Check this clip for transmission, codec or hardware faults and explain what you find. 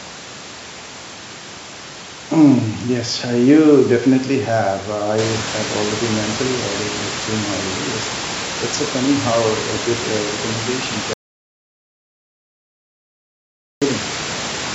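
One transmission fault is audible. An audio dropout to silence runs from 11.13 to 13.82 s, right after "good uh recommendation". The input was likely lost, leaving about 2.7 s of silence with no room tone, and the speech there is gone.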